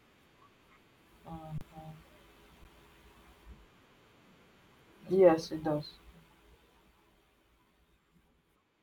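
At 1.58 to 1.61 s and again at 2.64 s, an underrun with held sample freezes the speech on a flat level, losing about 30 ms and then 10 ms before it resumes.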